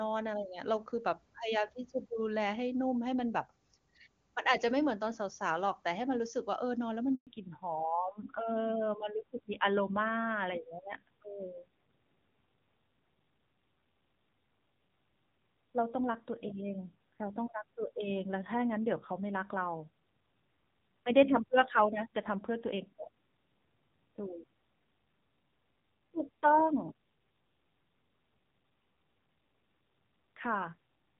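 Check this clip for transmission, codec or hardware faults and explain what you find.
Two faults are audible, at about 7.15 s and 7.27 s: a brief dropout followed by a lasting loss of bandwidth for the rest of the speech.

The handover gap runs from 7.15 s to 7.27 s, a 120 ms silence. While the call was being passed from one network link to another, no speech frames reached the decoder, so the voice fades out within a few tens of milliseconds and stays silent until the new link begins carrying audio. The speech that fell inside those 120 ms is simply missing, not smeared or muted.

The fallback to narrowband starts at 7.27 s, right as the new link comes up, and lasts to the end of the clip. Before it, the wideband HD Voice path sounds clean, with little or no codec damage, which fits AMR-WB at its 23.85 kbit/s top rate. After it, nothing above 4 kHz remains, so the voice turns dull and somewhat rough. 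That character points to a switch to AMR-NB at a low rate, around 7.4 kbit/s.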